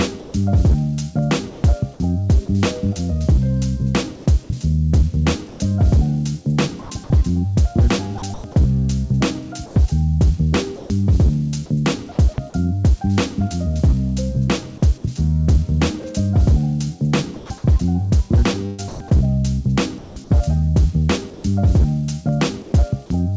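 From 0.2 to 1.6 s the background gives way to a smooth, featureless hiss. This is comfort noise in place of the background, likely because the sender paused transmission and the receiver synthesised filler. Between 4.16 and 10.9 s the sound turns choppy, with holes in it. This is sound chopped by the voice detector: it likely switched sending off and on repeatedly, and about 0.68 s in total was replaced with generated noise. At 16.02 s a brief 20 ms slice disappears. This is sound dropped by the voice detector, likely after it mistook a quiet moment for background. From 17.36 to 22.72 s the same choppiness returns, again sound chopped by the voice detector, with likely repeated switching replacing about 0.8 s in total. Through the whole clip, the G.722 call path leaves nothing above 8 kHz.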